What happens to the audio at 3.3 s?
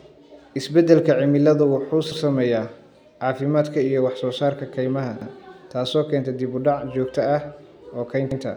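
At 3.3 s the speech carries on intact, with no dropout, click, distortion or other fault at that moment.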